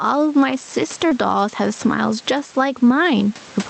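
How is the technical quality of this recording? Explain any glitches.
The recording has two problems: the level pumps throughout, and there is one brief dropout at about 1.09 to 1.13 s.

Gain pumping runs through the whole speech clip. The likely cause is input gain set far too high, with a fast limiter or compressor clamping down whenever the speech gets loud. The result is a level that swings by roughly 15 dB. The room noise sits about 30 dB under the speech. Loud and quiet passages are pressed close together, so the sound is squashed and breathing.

A short concealed packet loss occurs from 1.09 to 1.13 s, about 33 ms in all. Part of the audio never arrived in time for the decoder. The receiver improvised only partly across the gap by extending the preceding sound, carrying its pitch forward if voiced or substituting shaped noise if not, then crossfaded into the real signal again. It comes across as a quick smear or wobble, and a brief consonant there can go missing. 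The top end, which stops near 8 kHz, fits a typical call codec.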